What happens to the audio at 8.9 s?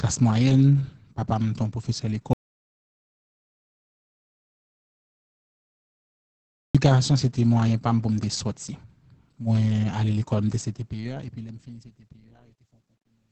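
At 8.9 s you're hearing the same Opus voice compression that runs through the whole clip. The speech is being squeezed through the SILK linear-prediction coder at a very low rate, which fits something around 10 kbps. Wideband mode keeps nothing above about 8.6 kHz, and the excitation is coded coarsely, so the damage is heavy. The speech comes out muffled and hoarse, with a faintly robotic edge.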